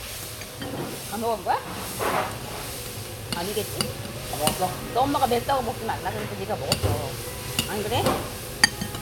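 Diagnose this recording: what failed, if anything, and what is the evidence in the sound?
Nothing in this recording of everyday sounds points to a failure at any stage of the chain. No event in the audio calls for a diagnosis.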